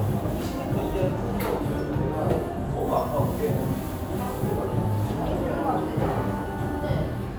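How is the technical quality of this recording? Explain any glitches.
Listening to the recording, nothing technical stood out as a problem.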